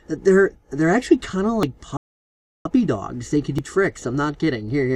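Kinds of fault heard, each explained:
Audio missing between chunks: About 50 ms vanishes at 1.63 s and 3.59 s with the edges butted together, likely lost while 2-second processing chunks were being switched.
Playback stall: The output goes silent mid-flow from 1.97 s to 2.65 s, about 0.68 s, likely because the player ran short of data or was blocked.
Time-compressed catch-up: From 2.65 s to the end the sound runs at about 1.1 times speed at unchanged pitch, small pieces cut and cross-faded to clear the backlog.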